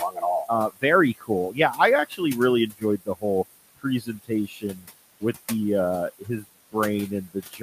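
Noise suppressor artifacts run throughout. The suppressor pulls the steady room noise down by about 18 dB, so the background sinks and swells around speech. Speech cut by the noise suppressor comes at 0.0–0.83, 1.18–2.21, 2.71–3.24, 3.76–4.87 (before "with the uh"), 6.19–6.75 (after "with the uh") and 7.1–7.62 s. Soft parts are dropped by up to about 21 dB and sound swallowed.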